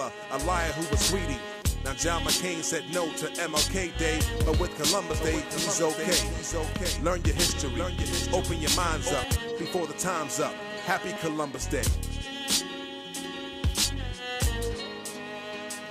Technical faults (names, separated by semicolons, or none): doubled audio track